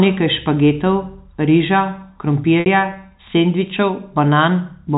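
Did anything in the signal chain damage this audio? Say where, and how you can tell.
Yes. The damage happens at the network stage. At 2.60 s the speech briefly freezes into a held, buzzy tone that lasts about 60 ms, to 2.66 s. This is packet loss with pitch repetition. Audio went missing in transit, and the 60 ms gap fits three lost 20 ms packets. The receiver bridged the hole by repeating the last pitch period and fading it out. The G.711 telephone coding shows only as the band limit at 4 kHz.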